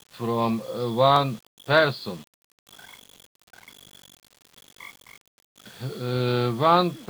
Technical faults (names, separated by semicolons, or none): low bit depth without dither; dropped samples